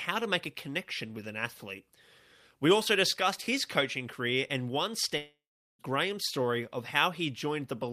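At 5.17 s, just after "coaching career and one", the speech gives way to a buzzy continuation of the last sound that fades out, leaving about 0.4 s of near-silence before speech resumes at 5.81 s with "story of". This is a long network dropout, likely caused by packets that stopped arriving. The receiver padded the gap by extending the last sound, and about 0.62 s of the original speech never returns.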